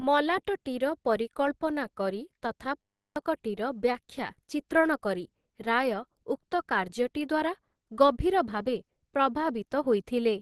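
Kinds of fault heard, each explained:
Opus compression: The speech sounds hoarse and somewhat muffled, with nothing above 12.1 kHz, likely from a low-rate Opus encode in its hybrid speech mode.
System hang loop: After "ମଲାଟଟିର ପରିକଳ୍ପନା କରି ତଥା", a 10 ms piece repeats from 2.81 to 3.16 s, giving a steady 100 Hz buzz.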